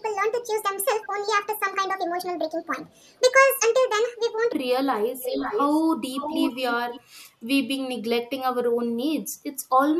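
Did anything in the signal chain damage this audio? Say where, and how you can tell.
Yes. From 0 to 4.53 s the speech runs 1.55 times fast, about seven semitones high. This section at the wrong speed likely comes from playback on a mismatched clock.

An echo leak from call processing returns delayed speech at 1.01, 1.43, 2.89, 5.22 and 6.13 s. It is faint at 371 ms, then loud at 531 ms. The echo canceller likely let it through.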